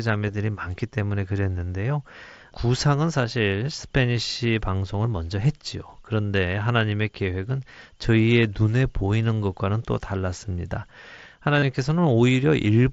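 At 0.31 to 0.34 s and again at 11.59 to 11.62 s, the speech briefly turns into a held, buzzy tone at full level, with a slight warble as real audio resumes. This is concealed Bluetooth headset packet loss. Voice packets from the headset were lost, about 22.5 ms and 30 ms of audio, which fits runs of three and four packets. The receiver filled each gap by repeating the best-matching recent stretch of waveform, heard through the mSBC headset codec's light graininess.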